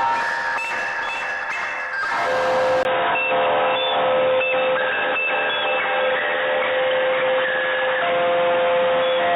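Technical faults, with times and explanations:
2.83 s to the end, input switched to a poorer device: after a 20 ms gap the music goes dull and boxy, with nothing above 3.8 kHz and a faint new noise floor well under it, at much the same level, likely a switch to a narrower-band input.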